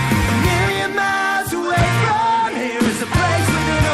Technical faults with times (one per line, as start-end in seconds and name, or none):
1.48-3.94 Bluetooth SBC bit pool drop